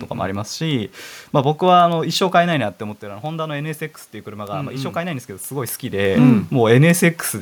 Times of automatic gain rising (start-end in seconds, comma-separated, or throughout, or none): 3.00-6.11